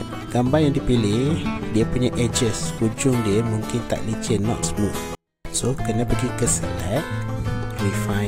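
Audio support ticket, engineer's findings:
Sound drops to near-silence at 5.15 s and returns at 5.45 s, staying clean, just about 48 dB down, for 0.3 s. 24-bit alignment error (too quiet). Probable component: sample-format conversion stage. 24-bit integers packed in the low bytes of a 32-bit word read as full 32-bit values, so every sample lands 8 bits too low.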